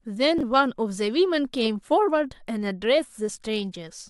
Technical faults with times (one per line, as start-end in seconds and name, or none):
0.38-0.43 chunks out of order